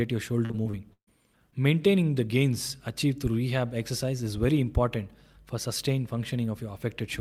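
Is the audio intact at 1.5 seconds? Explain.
No. There is a short concealed packet loss from 1.51 to 1.54 s. About 20 ms of the audio failed to arrive in time. The decoder patched the gap by extending the preceding sound and then blending back in. It is heard as a brief smear or wobble.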